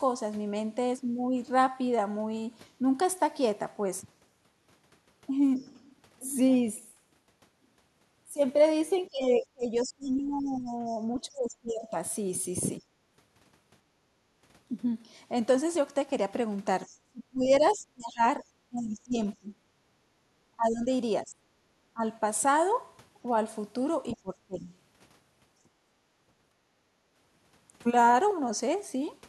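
Other side's voice leaking through appears first at 5.58 to 5.62 s as a faint scrap about 40 dB under the speech. It is likely residual loudspeaker echo that the canceller failed to subtract from the microphone. It returns louder, at about 30 dB below the speech, from 9.81 to 11.32 s and from 16.87 to 17.71 s.

Speech suppressed in double talk runs from 9.09 to 12.82 s and again from 17.04 to 24.69 s. The talker's level sinks by as much as about 25 dB, in pieces adding up to roughly two seconds and then three. This is likely the canceller damping everything while both sides overlapped.

Background gated by the echo canceller follows at 12.83 to 12.97 s (about 12 dB), 19.97 to 20.28 s (about 9 dB) and 25.92 to 26.03 s (about 15 dB). Each time the room tone briefly collapses while the microphone is clamped, then recovers once the canceller releases.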